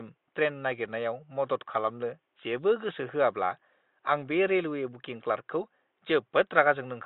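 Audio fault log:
Nothing stood out on listening to this speech, with the faint room noise sitting about 52 dB below the voice.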